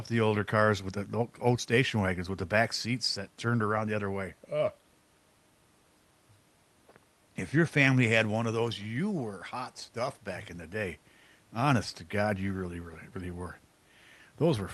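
Nothing in this speech recording stood out as a problem on listening.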